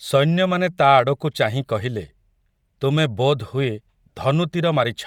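Throughout the speech, a grainy, breathy edge points to Bluetooth LC3 compression, likely around 48 kbps in 10 ms frames. A spectrogram shows blocky, noise-filled upper bands.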